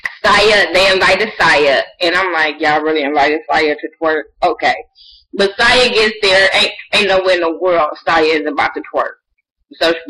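The audio drops in quality abruptly at 2.22 s and recovers at 8.22 s. This is an adaptive stream at a lower bitrate. For those six seconds the treble is missing, with nothing above 11.5 kHz, and codec artefacts grow more noticeable. The change is sudden in both directions, with no gap or dropout. This fits a player that switched from a higher-bitrate AAC version down to about 32 kbit/s when the connection slowed, then switched back once it recovered.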